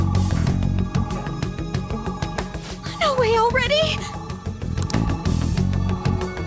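Aliasing runs throughout the clip: the audio was resampled to a lower rate without an anti-aliasing filter, consistent with a 16 kHz target, so content above 8 kHz folds back into unrelated lower frequencies, roughly 25 dB below the signal, giving a gritty, metallic edge right up to the band limit.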